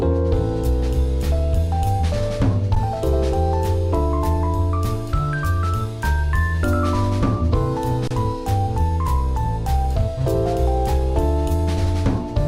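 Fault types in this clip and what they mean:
Underrun with held sample: the output buffer ran empty and the converter held its last value, flattening the waveform so the sound briefly stops, at 2.75 s for about 11 ms (fitting a 512-sample buffer) and 8.08–8.11 s; playback resumes where it paused, joining softly.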